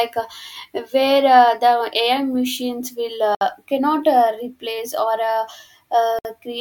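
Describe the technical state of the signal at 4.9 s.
At 4.9 s the speech signal is intact, with no fault audible at that moment.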